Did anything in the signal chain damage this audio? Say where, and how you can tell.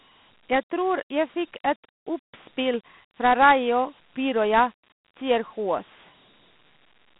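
Yes, at the codec. Dialogic VOX ADPCM throughout: speech sits in a 150 Hz to 3.6 kHz band, nothing above 3.8 kHz, with gritty hiss that fits 4-bit, 32 kbps coding.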